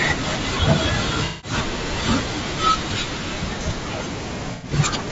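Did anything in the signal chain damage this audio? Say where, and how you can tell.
Yes. Throughout the clip the speech sounds rough and grainy, with noise filling the gaps between harmonics and a thin, synthetic-sounding top band. The likely cause is low-delay AAC compression (AAC-ELD) in the codec stage, at a bitrate that fits around 32 kbps. On a spectrogram the harmonics look smeared, with speckled noise between them.

AAC frame loss with concealment shows up at 1.25 to 1.54 s and 4.52 to 4.72 s, from data lost in the network or storage path before the decoder. There the decoder rebuilt the missing sound from the last good spectrum, which produces smeared, phasey patches. On a spectrogram these appear as blurred blocks, and the waveform loses its normal envelope.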